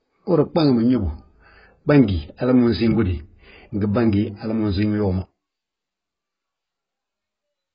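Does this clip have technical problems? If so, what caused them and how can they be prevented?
Yes. Throughout, the speech was likely squeezed by heavy AAC compression at a very low bitrate, around 12 kbps. Nothing survives above 5.1 kHz, so it sounds dull, smeared and warbly. Encoding at a higher bitrate would prevent this damage.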